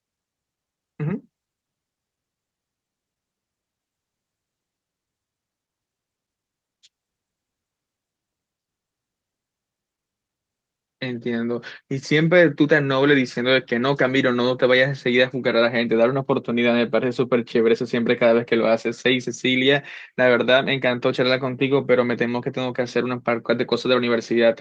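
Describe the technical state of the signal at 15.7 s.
At 15.7 s the speech signal is intact, with no audible dropout, clipping, glitch or other fault at that moment.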